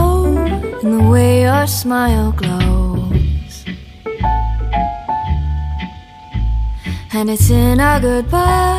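No technical faults can be heard anywhere in this audio.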